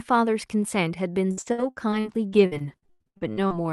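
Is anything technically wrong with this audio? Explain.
Yes. From 1.31 to 3.52 s the speech suffers repeated packet loss (robotic sound): nearly twenty gaps, each up to 99 ms, are patched by extending the last sound, so it turns choppy rather than dropping out once.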